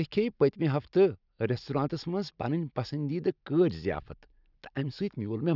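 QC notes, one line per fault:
No technical faults are audible anywhere in this speech recording.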